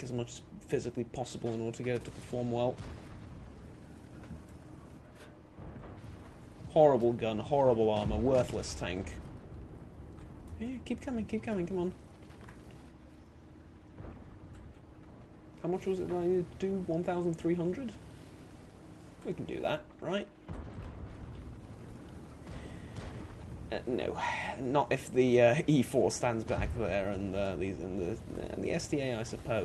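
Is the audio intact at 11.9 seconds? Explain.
Yes, the audio is intact at 11.9 seconds: there is no dropout, glitch or distortion there, only the ordinary sound of the call path it passed through.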